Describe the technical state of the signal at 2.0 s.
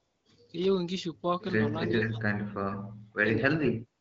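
At 2.0 s the speech drops out sharply, sinking by around 35 dB within a suppression stretch running from 1.87 to 3.26 s (about a second and a half of affected audio in all). It's likely speech suppressed in double talk: the echo canceller couldn't tell the near talker from loudspeaker echo, so it clamped everything down.

Layered over that, from 1.89 to 2.1 s, there's a copy of the speech trailing by 0.42 s and only a few dB below it. That's likely an echo leak, where a loudspeaker-side canceller let some of its mic pickup slip back into the call.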